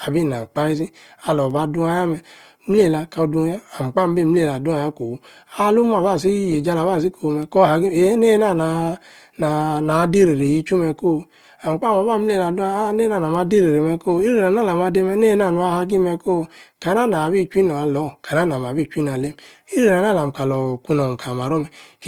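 Across the whole recording, the speech carries plainly audible Opus compression damage, likely from an encode in the codec's CELT music mode at a rate that points to about 24 kbps. The encoder still holds each band's energy. When bits run short, it patches the gaps with folded copies of lower bands or with noise. Holes stay rare, so there is little swirl. Instead, the voiced tones turn grainy, rough and noisy. Bandwidth remains full, with content reaching about 20.3 kHz.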